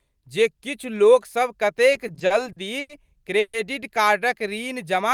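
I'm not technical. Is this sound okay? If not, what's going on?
No. From 1.93 to 2.91 s there are repeated stalls (stutter): the audio data kept arriving late, so playback ran dry eight times. Each time the system stretched the last bit of speech to cover, about 0.22 s in total, so nothing is lost but the speech drags and stutters.

At 3.39 to 3.55 s the sound briefly hangs as a held buzz for about 0.14 s before the speech carries on. This is a call audio freeze, likely caused by a short hold-up in delivery that pushed everything after it slightly later.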